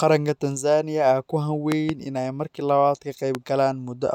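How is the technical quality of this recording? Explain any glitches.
The standout problem is loud pops. There's a double pop between 1.72 and 1.92 s and a single one at 3.35 to 3.37 s, each peaking roughly 15 dB above the speech. They're likely voltage spikes from a plug, switch or static, turned into sharp thumps while the speech carries on underneath.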